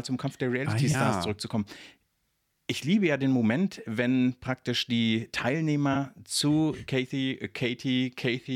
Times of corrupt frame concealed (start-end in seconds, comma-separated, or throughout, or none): 0.91-0.95, 5.93-5.96